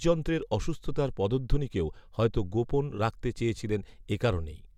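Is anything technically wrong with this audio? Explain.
No, nothing technically wrong jumps out here; this bit of speech sounds just fine to me.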